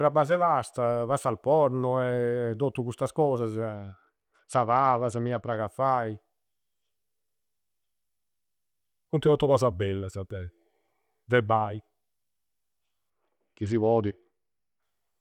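Speech with two Bluetooth SBC bit pool drops, from 3.75 to 5.57 s (starting just before "a fai") and from 13.10 to 14.82 s. Treble dulls and gritty quantisation noise rises, which fits the bit pool falling from 31 to 10, around 77 kbps, on a congested link.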